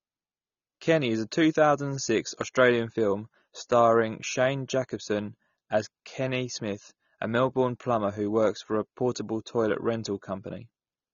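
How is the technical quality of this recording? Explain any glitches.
The recording has plainly audible codec damage from start to finish. AAC compression, throughout: the speech sounds dull and smeared, with a warbling, fizzy edge on sibilants and held vowels. The likely cause is a low-bitrate AAC-LC encode, near 24 kbps, whose starved bit budget lowers the cut-off and quantises high bands coarsely.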